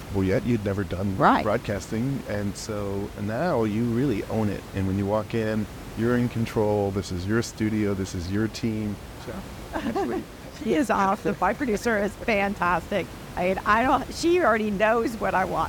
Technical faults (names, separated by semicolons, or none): none